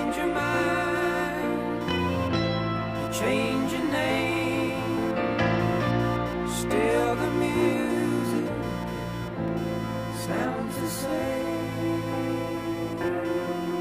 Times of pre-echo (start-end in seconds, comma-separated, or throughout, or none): none